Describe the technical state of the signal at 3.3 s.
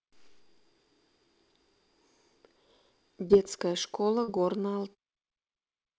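Around 3.28 to 3.31 s there is a short concealed packet loss: about 20 ms of speech never arrived, and the receiver extrapolated the preceding sound before blending back. It's heard as a brief smear.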